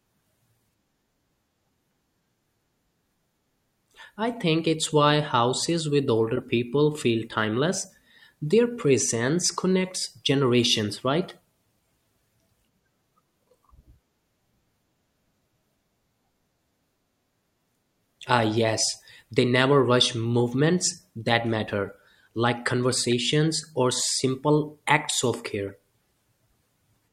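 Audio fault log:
6.36–6.39 s, 23.08–23.13 s and 25.63–25.70 s, corrupt frame decoded: damaged compressed frames were decoded and played anyway, so misread gains and codes spread energy into the wrong frequencies for the length of those frames. Each is a brief chirp or noisy blip, roughly two frames long at the first two and four at the third, peaking near -20, -15 and -30 dBFS. A spectrogram shows short, sharp-edged vertical smears.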